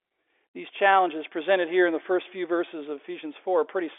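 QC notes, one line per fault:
No faults detected.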